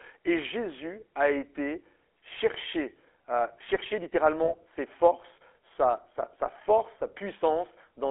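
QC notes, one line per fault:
Throughout: GSM full-rate codec. The speech has a buzzy, gravelly roughness and a boxed-in, thin tone, with no low bass below about 300 Hz and nothing above about 3.4 kHz. The codec rebuilds speech from a vocal-tract filter fed by a coarse, regularly spaced pulse excitation that keeps only every third sample. That crude excitation causes the grainy buzz, and the narrow telephone band limits the range. At 13 kbps the damage is plainly audible.
4.44 to 4.53 s: lost GSM frames. Just after "été cherché euh chercher", the sound briefly freezes into a short, rough, metallic ring before speech resumes at "ses forces sa". The decoder hid the missing data by repeating the last good frame's settings, and that repetition gives the held, tinny tone. The gap lasts about 40 ms, which fits two lost 20 ms frames, too short to fade to silence.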